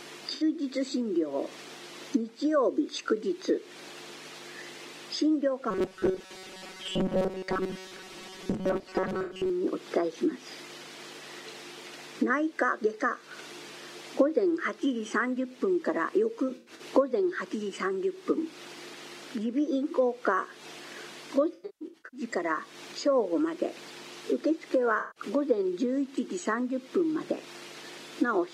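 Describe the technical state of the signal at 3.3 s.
The signal at 3.3 s is intact, with no audible fault at that moment.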